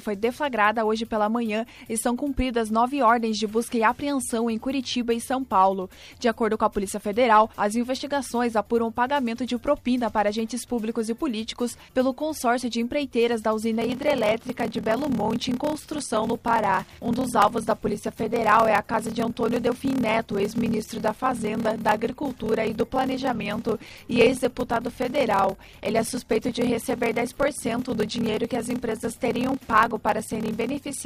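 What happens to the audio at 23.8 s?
At 23.8 s you're inside a block size mismatch (padded) running from 13.79 s to the end. Each 1024-sample block gets zero-filled to a longer read size, so there's a 38.3 Hz buzz from the gaps and the sound drags at 0.889 speed, pitch roughly unchanged.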